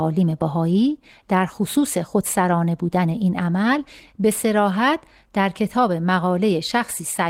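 No technical faults are audible.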